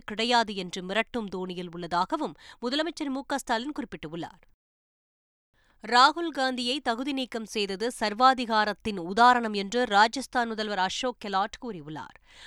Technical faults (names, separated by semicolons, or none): none